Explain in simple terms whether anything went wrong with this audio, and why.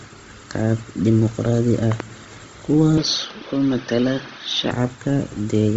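The speech sounds breathy and grainy from start to finish, with nothing above about 7.7 kHz. That grain, rather than plain dullness, points to Bluetooth LC3 compression, likely over a low-quality link.

From 1.92 to 2.02 s there is a loud pop, heard as two sharp clicks in quick succession. The speech carries on underneath, so nothing was lost. It is likely static or a plug being bumped.

From 2.98 to 4.71 s the input switched to a poorer device. The sound turns duller, loses everything above 6.2 kHz and picks up faint extra hiss, then clears again. There is no gap and no change in loudness at the switch. It sets in and ends at fixed moments, unlike the steady compression, and a second, lesser microphone is the likely cause.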